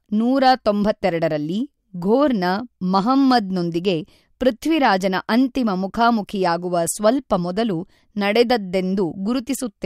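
It's a speech recording with short bursts of hard clipping on loud peaks, at 0.46 to 0.69 s, 2.97 to 3.37 s and 8.36 to 8.42 s. In each spot the level runs about 2 dB past what the stage can pass, so the waveform tops get sheared flat. Those flat tops throw extra harmonics high up the spectrum, and you hear it as a brief crackly edge on the loudest moments rather than a continuous fuzz.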